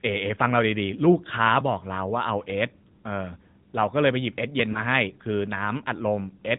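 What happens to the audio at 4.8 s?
Between 4.72 and 4.80 s, a speech frame was lost: it failed its error check, so the AMR decoder reused the previous pitch and vocal-tract settings at reduced gain. The result is a brief dip or warble, consistent with a single lost 20 ms frame, before the voice returns weak or rough for a moment.

Underneath this, the whole passage runs through the AMR narrowband mobile codec at 10.2 kbps, which removes everything above 4 kHz and rebuilds the voice from a simplified model. It sounds plainly buzzy and synthetic.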